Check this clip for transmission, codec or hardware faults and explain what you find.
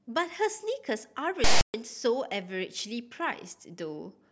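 One fault is present in this speech clip: file tags played as audio, from 1.44 s to 1.74 s. A block of text metadata, followed by zero padding, was decoded as if it were sample data. The character bytes become a loud, harsh rasp sitting off to one side of centre, because text values cluster in a narrow range rather than swinging around zero. The padding bytes are all zero, so the rasp gives way to dead silence, and both edges of the burst are abrupt.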